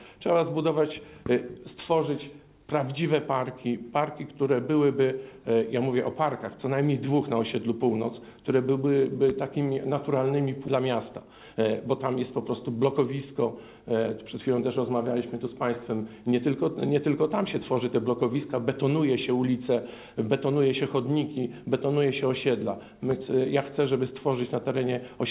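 At 10.68 s a skip ahead drops roughly half a second of audio, joining both sides abruptly; the waveform shows a hard splice with no silent gap. From 11.22 to 11.87 s a jitter buffer speed-up trims short pitch-period slices, running about 8% fast at unchanged pitch; spectrogram harmonics stay level while the timing compresses. Throughout, the band stops at 4 kHz, which fits a telephone-grade call codec.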